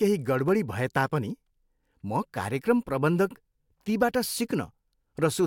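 A single sharp click at 0.48 s comes from dropped samples, likely a fraction of a millisecond missing, so the waveform jumps abruptly to a later value.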